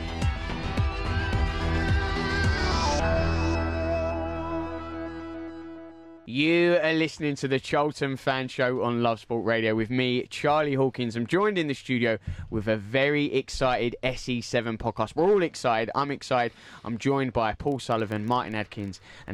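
From 17.68 s to the end, the audio takes on a low, rough buzz at 25 Hz, a rapid train of ticks that grows and shrinks with the loudness of the sound underneath it. This is a filter restarted on every block: the filter loses its memory at each block boundary and begins again from silence, so every block opens with a small transient. Those transients repeat every 40 ms, which fits processing in blocks of that length.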